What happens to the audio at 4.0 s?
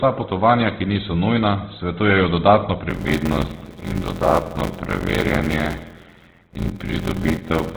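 A steady buzz near 86 Hz runs under the speech, which drags slowly with its timbre kept. This is a block size mismatch (padded), from 2.89 s after "niso nujna svetujejo dodatno" to the end. Shorter written blocks, zero-filled to fit a 512-sample read, insert a gap in each block, slowing playback to 0.625 speed. The sound is also narrow, rough and grainy, with nothing above 4 kHz, likely from Opus compression in CELT mode at 12 kbps.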